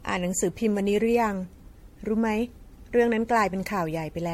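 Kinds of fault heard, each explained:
Generation loss, throughout: the speech sounds swirly, smeared and hollow, with consonant attacks blurred and nothing above 16.5 kHz. This is likely the result of repeated lossy re-encoding, around seven passes of what sounds like MP3 at about 64 kbit/s. Each pass quantises the signal again on a shifted frame grid, so noise and spectral gaps pile up beyond what a single encode at that rate would leave.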